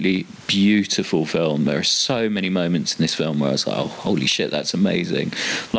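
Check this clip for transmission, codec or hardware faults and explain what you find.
One fault runs through the whole clip: gain pumping, heard over room noise about 37 dB below the speech and a wideband call sound with nothing above 8 kHz, which fits G.722.

Gain pumping runs from start to finish. The likely cause is input gain set far too high, with a fast limiter pulling it down on each loud syllable. The gain swings by around 20 dB. On a waveform the peaks look flattened. On a spectrogram the noise floor brightens in the gaps.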